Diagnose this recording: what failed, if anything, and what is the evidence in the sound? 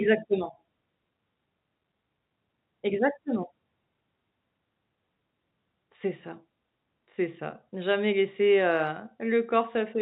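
Nothing stood out on listening: the speech comes through the telephone-band path as expected, with no failure audible at any stage.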